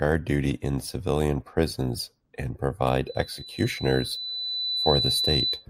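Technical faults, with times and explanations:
3.07–5.66 s, loudspeaker feedback squeal: a pure 4 kHz tone rises out of the speech and swells for about two seconds until it sits a few dB above the voice. The microphone is hearing its own loudspeaker, and at 4 kHz the loop gain passes unity, so that frequency feeds on itself. A spectrogram shows one bright horizontal line at 4 kHz that thickens and brightens. The waveform's envelope grows steadily over the speech.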